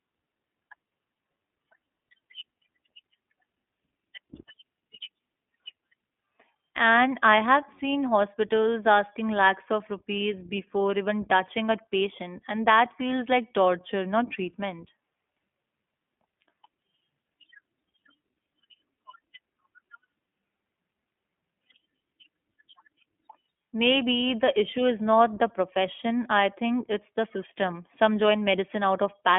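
Speech carries the iLBC codec throughout, with plainly audible coding damage: a slightly rough, synthetic quality, its texture fitting 20 ms frames, each rebuilt independently, as in the 15.2 kbps mode. The line band runs roughly 250 Hz to 3.5 kHz, so the sound is thin and boxy. On a spectrogram, energy stops dead near 3.7 kHz with nothing above it, and the lowest band is empty; harmonics look smeared and slightly blocky between frames.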